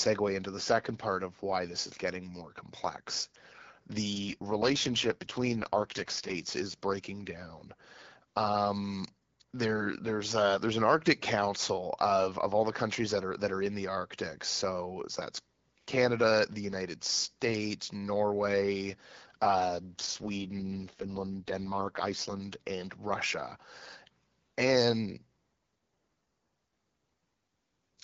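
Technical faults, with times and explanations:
4.13 to 6.38 s and 19.99 to 22.42 s, AMR rate drop: the speech turns rough and synthetic for about two seconds, with no gap or lost bandwidth. This fits the wideband codec stepping down from 12.65 to 6.6 kbit/s on a weak link.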